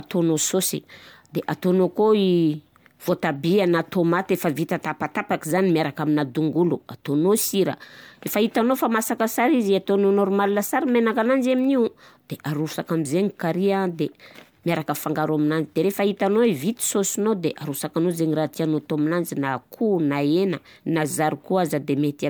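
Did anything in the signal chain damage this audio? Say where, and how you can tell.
Yes, at the codec stage: throughout the speech, swirly, hollow smearing and blurred attacks exceed a single MP3 encode at around 130 kbit/s, likely generation loss from about four successive re-encodes.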